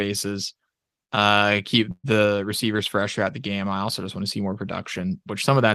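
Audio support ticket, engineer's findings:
Call audio freeze, 1.91 to 2.06 s, just before "the receivers fresh throughout". Sound stalls. Last sound carried on as a fading buzz, 123 ms filled in all, ending in 40 ms of silence. Likely jitter buffer underrun from delayed packets. Playback resumes where it stopped. Nothing lost. Delay grows by 123 ms.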